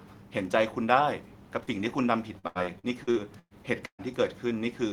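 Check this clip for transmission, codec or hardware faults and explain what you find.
Two transmission faults are audible in this speech clip, both from packets that failed to reach the decoder in time.

From 1.63 to 1.70 s there is a short concealed packet loss. About 40 ms of audio never arrived, and the receiver bridged it by extending the preceding sound: its pitch where voiced, shaped noise where not, before blending back into the real signal. The result is a brief smear or wobble at that point.

From 2.39 to 4.02 s the loss becomes repeated packet loss, giving a robotic sound. Seven separate gaps hit this stretch, totalling about 480 ms, with the longest lasting about 119 ms. Each hole is patched by continuing the last sound, and the next hole arrives before the speech has fully recovered, so roughly 29% of the span is synthesised fill. The speech turns choppy, with fragments dropping out, while the room noise stays about 39 dB below the speech throughout.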